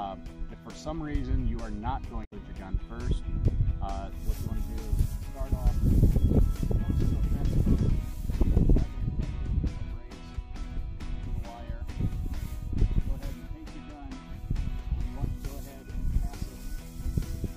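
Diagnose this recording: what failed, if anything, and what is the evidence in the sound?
The fault is in the codec stage: damaged data in a compressed stream. From 2.21 to 2.33 s, about 120 ms, a brief garbled burst breaks through the audio. Corrupted bytes there made the decoder misread frames, lose sync and hunt for the next valid header.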